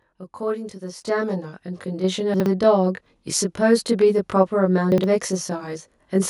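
Channel delay causing comb filtering runs throughout. One channel trails the other by roughly 20 ms before the two are folded to mono, so shared content cancels at closely packed, evenly spaced frequencies starting very low. The sound is rough or slightly doubled.

A microphone volume step-up happens at 1.02 s. The input gain jumps by about 6 dB in a single step, and the voice and the background get louder together, abruptly, partway through the sound.

Chunks out of order appear from 2.34 to 2.46 s and again from 4.92 to 5.04 s. Each time, a 60 ms block arrives one chunk late and plays after the block that should follow it. Nothing is missing, but the order is scrambled, producing a brief jumbled moment.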